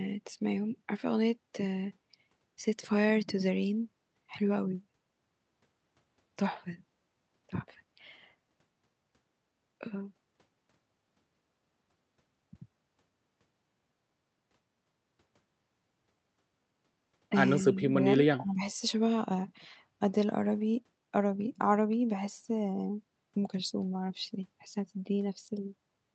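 Speech that dips slightly from 17.63 to 17.95 s, then nearly cuts out from 18.29 to 18.77 s, is speech suppressed in double talk: the echo canceller likely mistook overlapping far-end sound for echo and pulled this talker down along with it.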